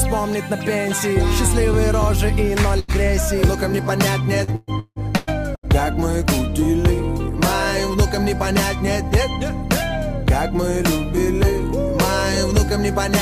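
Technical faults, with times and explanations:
2.79–2.91 s, burst of packet loss: The sound briefly freezes into a held, fading sound and then jumps ahead, with about 80 ms of material gone. A short run of packets failed to arrive in time, so the receiver stretched the last good audio for about 86 ms, lowering it as the gap continued. When fresh packets arrived, playback picked up from a later point, so the part in between never plays.
4.44–5.66 s, repeated packet loss (robotic sound): Across this stretch the audio turns choppy, breaking up five times, with the longest hole lasting 166 ms. Packets kept going missing or arriving late, and each gap was patched by extending the preceding sound. About 511 ms of the span, roughly 42%, is this synthetic fill. Around 520 ms of the original audio is lost, leaving a stuttering sound with pieces missing.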